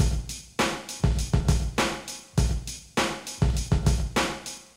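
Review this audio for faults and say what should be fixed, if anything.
Periodic USB or driver dropouts, 0.28 to 4.50 s: a stalled bus or driver skips about 2 ms every 0.25 s, giving roughly twenty ticks whose even spacing sets them apart from random clicks. To prevent it, record with a larger driver buffer on an unshared USB port, with background tasks that poll the bus disabled.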